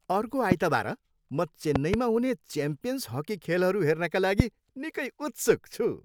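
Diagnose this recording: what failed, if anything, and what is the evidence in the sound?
Sharp loud pops burst about 20 dB above the speech at 0.52–0.54 s, a double pop at 1.76–1.96 s, and 4.40–4.42 s, likely voltage pulses from analogue wiring.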